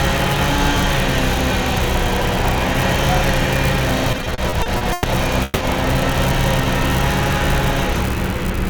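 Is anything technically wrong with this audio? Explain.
Yes, two faults. Repeated stalls (stutter), 4.12–5.06 s: ten brief freezes, the longest 110 ms and about 30% of that span, where late packets emptied the jitter buffer. The sound drags and stutters, showing repeated smeared columns on a spectrogram. Call audio freeze, 5.44–5.63 s: the sound hangs as a fading 170 ms buzz, likely from packets held up in transit. It appears as flat, stretched bands in a spectrogram and a decaying waveform before playback resumes.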